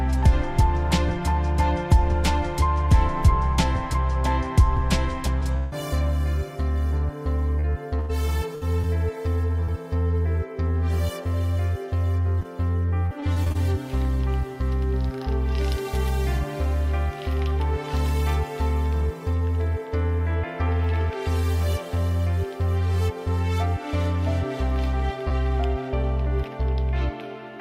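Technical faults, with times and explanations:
5.39–5.43 s, 9.65–9.70 s, 12.40–12.43 s, 25.29–25.32 s: short concealed packet loss. Each time about 20 ms of audio never arrived, and the decoder extended the preceding sound to cover it. This is heard as a tiny smear or wobble. On a spectrogram it shows as a thin vertical seam where the harmonics briefly freeze, and on the waveform as a repeated cycle blending back in.
5.57–5.74 s: burst of packet loss. About 140 ms went missing in one run. The decoder held the last sound and let it decay, producing a sustained buzz or hiss before the audio picks up further along. On a spectrogram this appears as a smooth, frozen band that fades, then an abrupt change where real content resumes.
7.60–8.85 s and 13.06–13.57 s: repeated packet loss (robotic sound). The first stretch has four gaps totalling about 220 ms, with the longest 96 ms, so roughly 17% of the span is patched. 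The second has six gaps totalling about 140 ms, with the longest 46 ms, making 29% concealed. Repeated patching gives a choppy texture. A spectrogram shows a comb of frozen blocks interrupting the normal detail.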